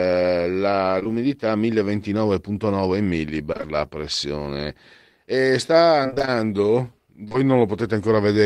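Short concealed packet loss occurs at 0.99 s and again at 1.04 s: two back-to-back 20 ms holes, each patched by extending the preceding speech, giving a brief smeared wobble. Repeated packet loss (robotic sound) follows from 3.53 to 3.68 s, where three short gaps are concealed in quick succession. It recurs from 6.03 to 7.44 s with about ten gaps of up to 26 ms, leaving choppy speech with fragments missing.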